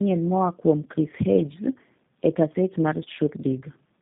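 Tandem speech coding runs the whole way: the speech was squeezed through a low-rate coder like G.729A twice, so it's rough, warbly and muffled, with nothing above 3.7 kHz.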